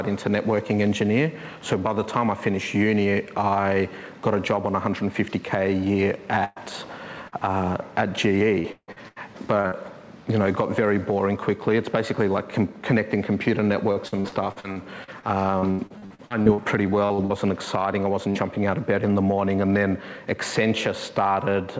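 Burst of packet loss at 6.44 to 6.59 s and again at 18.30 to 18.38 s: runs of late or lost packets left holes of about 120 ms and 40 ms, which the receiver bridged by extending and fading the last sound into a held buzz or hiss before the audio jumps ahead. Short concealed packet loss at 7.28 to 7.35 s: roughly 40 ms never arrived and was patched from the preceding sound, leaving a brief smear or wobble. Repeated packet loss (robotic sound) from 8.60 to 9.75 s and from 13.92 to 17.33 s: six gaps, the longest 158 ms, then twenty-one gaps up to 79 ms each, with a quarter to over a third of each stretch synthesised, giving choppy audio with pieces missing. All of this rides on a call path whose content stops at 8 kHz, which fits G.722 at 64 kbps.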